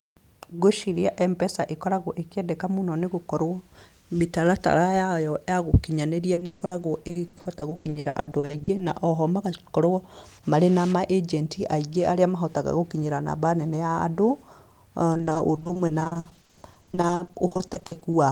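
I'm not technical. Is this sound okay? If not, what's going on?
No. From 6.33 to 8.81 s and again from 15.13 to 18.15 s, the speech turns choppy and robotic: repeated packet loss, with missing pieces patched over.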